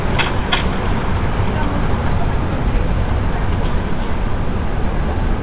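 Everyday sounds carried over a call path whose G.711 mu-law coding leaves nothing above 4 kHz. At 2.12 s there is a skip ahead: roughly a second of audio was discarded while later audio was already waiting, and playback resumes almost directly with no gap.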